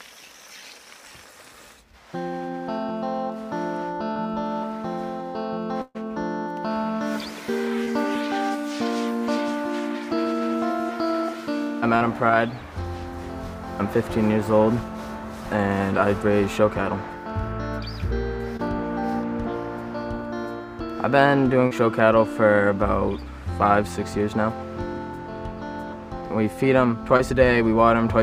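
Short concealed packet loss occurs at 4.13, 7.85, 11.97, 18.57, 21.67 and 27.17 s: 20 to 40 ms never arrived, so the receiver extended the preceding sound, leaving brief smears or wobbles. A burst of packet loss from 5.81 to 5.97 s lost about 140 ms; concealment stretched the last sound for most of it and faded to a short silence before the audio resumed with that stretch missing.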